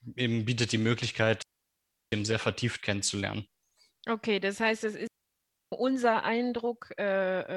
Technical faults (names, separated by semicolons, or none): digital wireless dropout